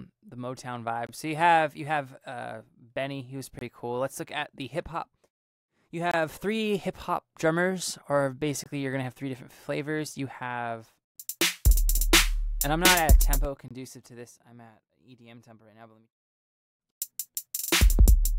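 Gap between chunks at 1.07, 3.59, 6.11, 8.64 and 13.68 s: the audio arrives in 2.5 s pieces with about 23 ms of hard-edged silence inserted at each join.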